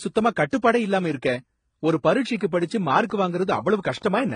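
Throughout, the speech carries layered codec smear and nothing above 9.8 kHz. This is likely transcoding between lossy codecs, which points to a low-rate HE-AAC source re-encoded before MP3.

From 2.59 s to 4.31 s, just after "ஒரு பரிட்சைக்கு", a train of clicks ticks unevenly, about four per second. There are around seven clicks, each roughly as loud as the speech, likely from interference.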